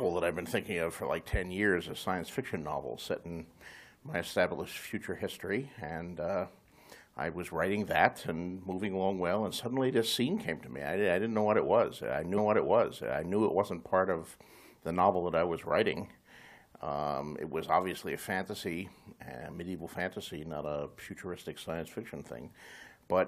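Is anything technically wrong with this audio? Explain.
Yes. At 12.37 s a stream segment is repeated: the player queued or fetched the same chunk twice, so about one second of audio, running to 13.36 s, plays again. This adds roughly 1.0 s to the programme, with a small blip at the jump back.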